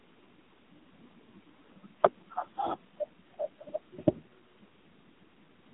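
Throughout, the speech sounds buzzy and synthetic, thin and boxed into a narrow band with nothing above about 3.8 kHz. This is heavy AMR narrowband mobile codec damage: the vocal-tract model starved of bits, which fits a low mode around 6.7 kbps.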